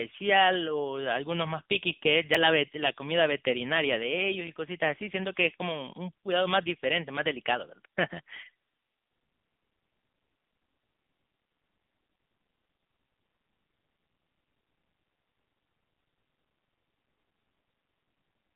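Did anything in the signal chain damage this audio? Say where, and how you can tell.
Yes. At the codec stage, AMR narrowband mobile coding limits the speech to roughly 150 Hz to 3.6 kHz, with nothing above 3.7 kHz. The audible buzzy, synthetic quality fits a low rate near 8 kbps.

At the buffer stage, audio is missing between chunks at 2.35 s and 6.32 s. Each skip drops about 20 ms, and the 4-second spacing likely comes from the recorder's chunk boundaries.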